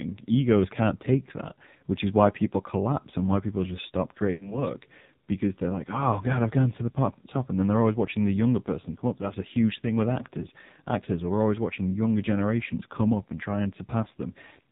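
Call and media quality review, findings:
AMR narrowband mobile codec, throughout: band capped at 4 kHz, heavily buzzy, synthetic speech from pulse-driven vocal tract model, consistent with a low mode near 5.9 kbps.

Lost AMR speech frames, 4.34 to 4.66 s, after "why people just stop": decoder repeats last pitch and tract settings, with falling gain; fits three lost 20 ms frames, 60 ms.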